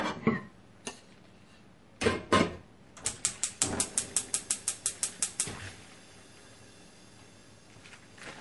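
Throughout, the sound carries smeared, swirly low-bitrate MP3 artefacts. This is likely low-bitrate audio saved at a high bitrate, roughly 48 kbit/s re-encoded at 256 kbit/s.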